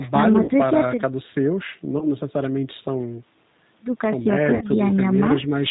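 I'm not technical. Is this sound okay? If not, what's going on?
No, there are two problems. The whole clip goes through the G.729 codec, a phone-call compressor that rebuilds speech from a rough model of the voice and drops everything above 4 kHz, so the speech sounds muffled, a bit gritty and synthetic.

There are also three short dropouts covered by VoIP packet loss concealment, at 0.44–0.51 s, 1.99–2.09 s and 4.55–4.66 s. About 40 ms, 20 ms and 60 ms of audio went missing. The decoder filled each gap by guessing, which gives a brief buzzy or noisy smear, and the speech stays weak for a moment afterwards.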